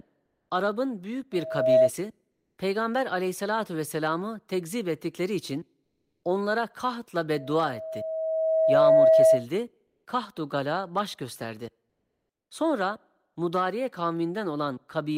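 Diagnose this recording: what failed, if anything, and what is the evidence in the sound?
Pauses at 0.25–0.49, 2.31–2.57, 5.83–6.23, 9.87–10.05 and 11.89–12.49 s go flat and featureless, with a level change of about 2–8 dB. This is likely codec discontinuous transmission inserting comfort noise in place of the background.

A 643 Hz tone swells into a loudspeaker feedback squeal at 1.32–1.90 s and 7.35–9.46 s, ending roughly 10 dB above the speech. The microphone is re-amplifying the playback loudspeaker with loop gain above one.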